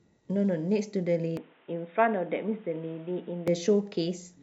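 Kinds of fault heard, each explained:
Input switched to a poorer device: from 1.37 to 3.48 s the speech turns dull and boxy, losing everything above 3.8 kHz and gaining a faint new hiss, with no gap or level jump. The input likely moved to a narrower-band microphone, then back.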